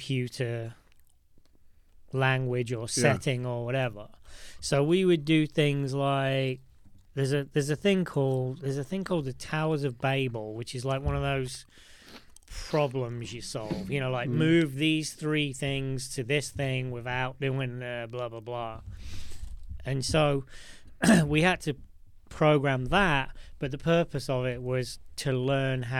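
Nothing goes wrong anywhere in this recording, so there's no technical fault to point out at any moment.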